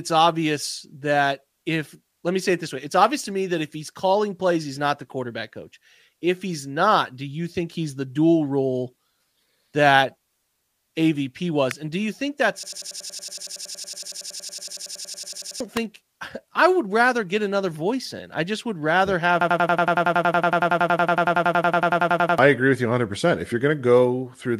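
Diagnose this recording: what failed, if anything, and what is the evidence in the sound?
Two sharp snaps at 11.71 s and 15.77 s, each only a few milliseconds long, sit on top of the speech without interrupting it. That points to an electrical switching spike in the analogue wiring, likely a nearby switch or motor arcing. A digital glitch would instead replace or break the underlying signal.

From 12.63 to 15.60 s and again from 19.41 to 22.38 s, a 92.88 ms slice repeats exactly 32 times, a machine-gun stutter at 10.8 Hz. This is a system hang loop at the driver or buffer stage, and it fits a 4096-sample ring buffer being replayed while the host froze. About 3 s of speech is lost each time. Packet-loss concealment would instead fade or smear the audio rather than repeat it identically.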